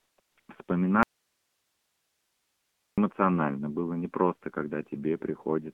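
The whole clip carries the AMR narrowband mobile codec. The speech sits in a band from 150 Hz to 3.4 kHz, with nothing above. The vocal-tract model runs short of bits. The speech sounds buzzy and synthetic, which fits the low 7.4 kbps mode.

AMR comfort noise fills four gaps near the start: 0.00 to 0.18 s, 0.20 to 0.38 s, 0.40 to 0.48 s, and 0.64 to 0.68 s. The phone sent no speech frames there. The receiver made up smooth, steady noise that switches in and out abruptly.

From 1.03 to 2.98 s the speech cuts out abruptly. For nearly two seconds only faint hiss remains, roughly 50 dB below the speech. Then the speech snaps back mid-flow. This is an audio dropout to a faint residue, likely a lost signal while the path stayed live.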